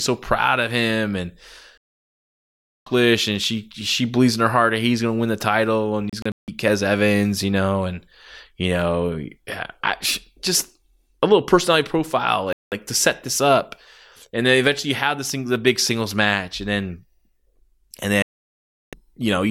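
The speech cuts to silence four times in a digital broadcast dropout. Frames stopped arriving intact, so the receiver muted. Gaps: 1.78 to 2.87 s, broken holes across 6.10 to 6.48 s, 12.53 to 12.72 s, and 18.22 to 18.93 s. That audio is gone.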